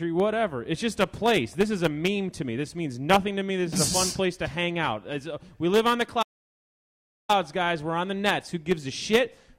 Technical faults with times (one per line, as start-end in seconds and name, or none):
6.22-7.30 playback stall